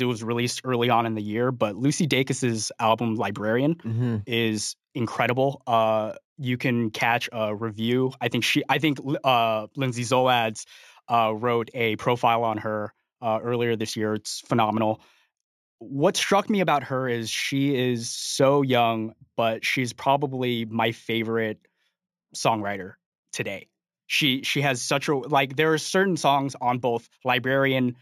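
Right from the start and running the whole way through, the speech carries imaging from linear upsampling. It sounds like the audio was brought up to 48 kHz from something that fits a 16 kHz original, by just joining samples with straight lines. That weak filtering dulls the top of the band and leaves a mirrored copy of the spectrum between 8 and 16 kHz, roughly 25 dB down, which gives sibilants a faint metallic shimmer.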